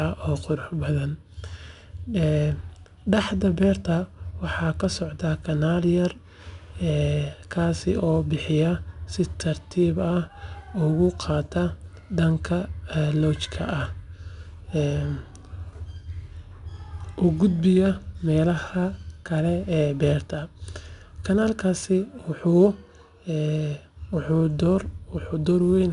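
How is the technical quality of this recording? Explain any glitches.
The recording has plainly audible coding damage throughout. The speech was stored with 4-bit ADPCM compression, which fits a stream of roughly 89 kbps. Each sample is coded as a coarse step from a prediction, so a gritty hiss rides on every loud syllable and sharp onsets distort. Nothing reaches above 10.6 kHz, which dulls the top end.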